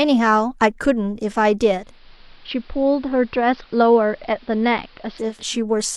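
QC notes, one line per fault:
1.69–5.61 s, digital radio blending to analogue: the receiver cross-fades over 440 ms to the AM broadcast and back. The spectrogram shows the band cut off in the treble and a faint hiss floor roughly 30 dB down, and the waveform drops by about 3 dB.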